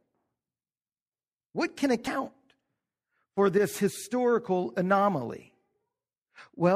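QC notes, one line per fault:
2.04–2.07 s, damaged data in a compressed stream: a short stretch of the encoded stream arrived corrupted, so the decoder could not parse the frames there, lost its place, and had to hunt forward for the next valid frame header before resuming. For about 34 ms the speech is broken by a brief glitch before the decoder locks back on.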